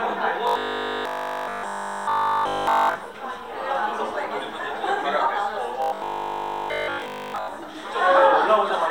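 A clip of everyday sounds with robotic sound from repeated short buffers from 0.47 to 2.95 s and 5.82 to 7.48 s. Essentially all audio there becomes a rigid 50 Hz buzz, likely from a 20 ms stretch looping while real input is skipped. It shows as evenly spaced harmonic lines on a spectrogram and an identical repeating waveform cycle.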